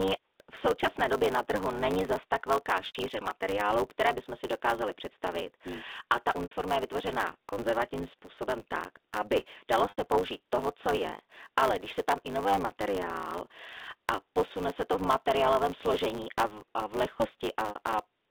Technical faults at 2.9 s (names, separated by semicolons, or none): block size mismatch (truncated); packet loss with pitch repetition